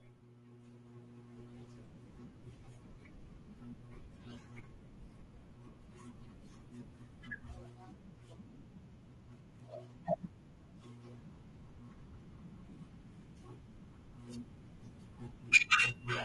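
Throughout, the speech is rough and grainy, likely from low-delay AAC compression at a rate fitting 32 kbps; a spectrogram shows blurred harmonics with noise between them.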